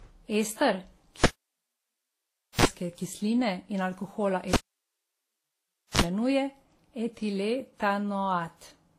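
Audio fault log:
throughout: transcoding between lossy codecs. Nothing is present above 15.5 kHz. The sound carries a mix of the different codecs' artefacts heard together at once. The likely cause is a chain of low-bitrate lossy encoders, ending in a WMA-type codec. Each stage spent bits re-encoding the previous stage's errors and added its own, and the lowest cut-off in the chain survived to the output.
1.24–2.65 s and 4.53–6.01 s (the second just after "in alkohola"): cable pulled and plugged in. Each event opens with a pop, then near silence for about 1.36 s and 1.43 s respectively. A short mains buzz of about 41 ms follows, at 60 Hz in the first event and 50 Hz in the second, while only the plug tip makes contact. A second pop marks the signal's return as the connector seats fully.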